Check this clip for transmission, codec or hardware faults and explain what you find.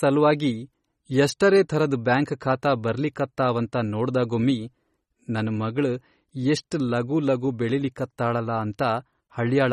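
One codec fault runs through the whole recording. Throughout, the speech carries plainly audible MP3 compression. The encoder was likely starved of bits, consistent with a low rate around 32 kbps. It cut all treble above 13 kHz and dropped weak frequency lines frame by frame, leaving the speech dull, watery and swirly, with metallic chirping on s sounds and smeared consonant attacks.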